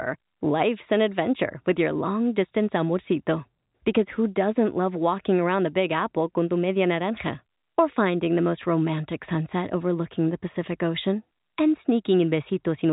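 No technical faults are audible.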